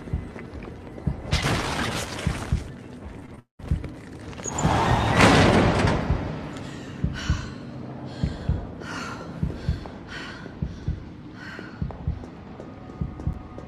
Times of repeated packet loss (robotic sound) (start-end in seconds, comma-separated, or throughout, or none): 3.19-3.61